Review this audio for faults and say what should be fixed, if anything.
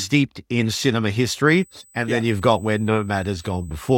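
A thin, steady 8 kHz whine enters at 1.47 s, just after "in cinema", and holds to the end, about 30 dB below the speech. This USB whine is bus current drawn in 125-microsecond microframes leaking through shared power or ground. A USB isolator would prevent it.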